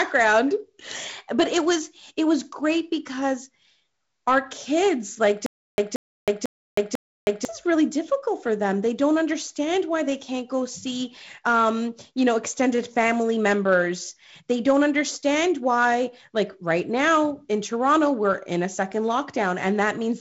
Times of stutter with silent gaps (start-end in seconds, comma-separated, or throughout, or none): 5.46-7.45